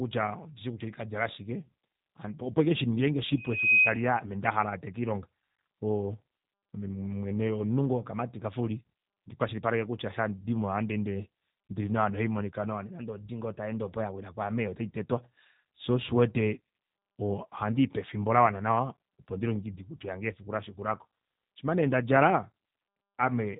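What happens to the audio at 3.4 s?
A single piercing tone at 2.5 kHz swells up over a little under half a second and sits roughly 10 dB above the speech, howling from 3.32 s until it drops away at 4.11 s. This is a loudspeaker feedback squeal: the microphone was hearing the loudspeaker it drives, and at 2.5 kHz the round trip gained more than it lost, so that one frequency fed on itself and kept growing.

Running under that moment, and through the whole clip, the speech sounds rough, slightly buzzy and synthetic, with no content above 3.8 kHz. That is the G.729 codec at work, and the damage fits an 8 kbit/s stream. Rather than sending the waveform, it rebuilds each 10 ms frame from a vocal-tract filter, a pitch predictor and a handful of pulses, so fine detail is lost and everything above the narrowband ceiling is removed.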